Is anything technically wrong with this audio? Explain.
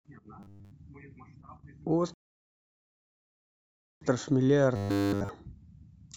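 Yes. From 0.40 to 0.71 s and 4.76 to 5.29 s, there's robotic sound from repeated short buffers. Audio likely arrived too seldom, so a 10 ms chunk looped, imposing a rigid 100 Hz metallic buzz over the speech. From 2.14 to 4.01 s, a rebuffering stall occurs. Playback ran dry and paused, leaving silence that adds 1.87 s before speech resumes exactly where it stopped.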